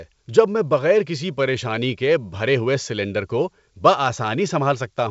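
Nothing stood out on listening to this speech, which comes over a G.722 wideband telephone path with content reaching up to about 7.7 kHz.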